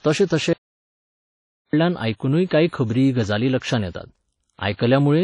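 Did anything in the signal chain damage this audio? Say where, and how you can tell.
Yes. At the codec stage, the speech was likely encoded with WMA at a low bitrate, around 32 kbps. Its transform blocks spread quantisation noise over tens of milliseconds and discard weak spectral detail, so the WMA compression damage is plainly audible throughout: ringing, washy hiss that follows the signal, and nothing above 10.1 kHz.

Between 0.53 s and 1.73 s, an audio dropout to silence cuts the speech off mid-flow for about 1.2 s. The gap holds no room tone at all, so the input was likely lost upstream while recording carried on writing silence. Whatever was said in that interval is gone.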